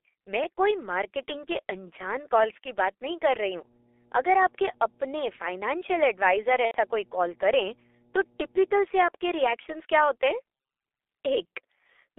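Throughout the speech, the G.723.1 codec is at work. The band runs only from about 300 Hz to 3.5 kHz. Coding damage is heavy, which fits a rate near 6 kbit/s. Voices sound muffled and hoarse. Consonants smear because the coarse frames track them poorly.

From 3.33 s to 8.85 s, mains hum sits under the speech. It is a steady 60 Hz tone with low harmonics, roughly 15 dB below the speech. A ground loop or nearby transformer is leaking the power line into the signal.

At 6.65 s to 6.76 s comes VoIP packet loss concealed by the speech codec. About 90 ms of audio is missing, which points to three lost 30 ms frames. The decoder repeats its last pitch and filter at falling gain. The gap turns into a fading buzzy tone or coloured noise. The speech stays weak briefly afterwards.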